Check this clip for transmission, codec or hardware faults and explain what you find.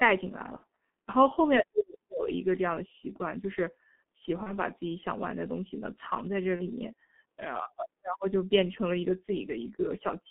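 Two faults are present: heavy G.723.1 codec damage throughout, and three short dropouts from VoIP packet loss concealed by the speech codec.

The G.723.1 codec affects the whole clip. The line passes only about 200 Hz to 3.5 kHz. The speech is muffled and hoarse, and the consonants smear. The coarse, slow-updating voice model fits a bitrate around 6.3 kbit/s, with 30 ms frames.

VoIP packet loss concealed by the speech codec occurs at 0.56–0.64 s, 4.43–4.59 s and 6.56–6.62 s. The decoder fills each gap by repeating its last pitch and filter at falling gain. The speech turns briefly into a buzzy tone or coloured noise and fades, then recovers weakly. The first gap fits two lost 30 ms frames, the others one.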